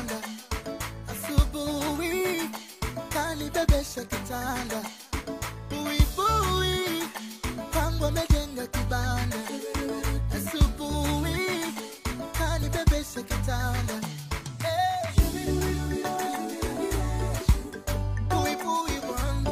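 A short glitch, a chirp, squawk, click or brief hole, breaks into the sound from 12.59 to 12.64 s, and a second one, just as brief, follows from 17.60 to 17.65 s. Both are damaged data in a compressed stream: part of the encoded data was lost or overwritten, so the decoder misread the frames there, lost its place in the stream and had to hunt for the next valid frame header. Each resulting blip lasts about 50 ms.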